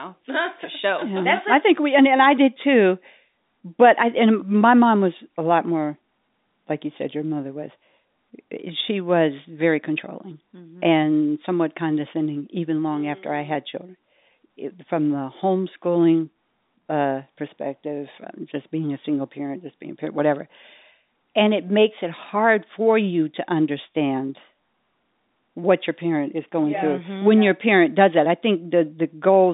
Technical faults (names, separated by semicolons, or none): none